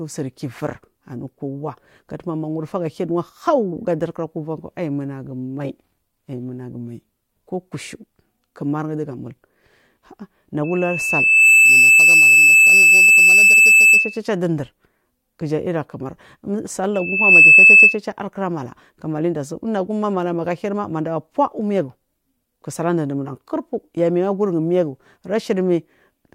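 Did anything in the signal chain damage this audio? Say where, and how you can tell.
Yes. Loudspeaker feedback squeal, acoustic loop. A 2.6 kHz tone swells over the speech from 10.64 to 14.20 s and 16.94 to 17.99 s, about 15 dB louder. Microphone hears its own loudspeaker.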